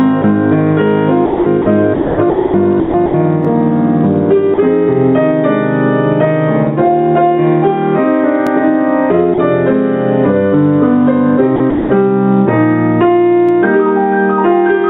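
Throughout the clip there is a level swing of around 10 dB, so loud and soft passages sit unnaturally close together and the whole thing sounds squashed. This is gain pumping, likely caused by input gain set far too high and a fast limiter or compressor hauling it back down on every peak, then letting it rise again as soon as the peak passes.

At 0.22 s a 20 ms sliver of sound vanishes into steady hiss. The same thing happens from 4.54 to 4.58 s and from 9.34 to 9.38 s, 40 ms each time. These are sounds dropped by the voice detector: the sending end likely judged quiet material to be background and stopped transmitting, and the receiver filled the hole with comfort noise until sending resumed.

Longer choppy stretches run from 1.26 to 1.66 s, 1.94 to 2.54 s, 2.80 to 3.14 s and 11.56 to 11.90 s. In each, the sound breaks up. In total 240, 480, 220 and 240 ms are replaced. This is sound chopped by the voice detector, which likely toggled repeatedly between sending and muting within each span, with comfort noise patched into every muted gap.

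At 3.45 s, 8.47 s and 13.49 s there is a click-like stutter, evenly spaced 5 s apart. These are overlapping chunks: the audio was handled in 5-second blocks, and each block began 20 ms before the previous one ended, so that 20 ms plays twice at every join. All of this comes through a call path whose band stops at 4 kHz, consistent with G.711 A-law telephony coding.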